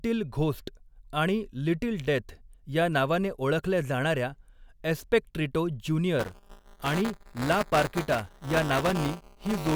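After "नावाने ओळखल्या जाणार्या एस्पेक्ट्रिटो", at 6.19 s, buffer tearing starts and runs to the end. Writing and playback have slipped within the ring buffer. About a tenth of each period replays audio some 10 ms old. The hard joins make a robotic 200 Hz buzz.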